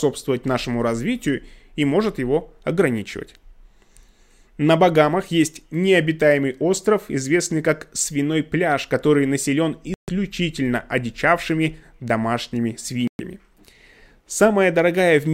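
Speech, with corrupt frames muted twice: bit errors made the decoder reject runs of compressed frames, and the player substituted silence. The sound drops out abruptly from 9.94 to 10.09 s and again from 13.08 to 13.21 s, each gap fitting several consecutive frames, with timing preserved.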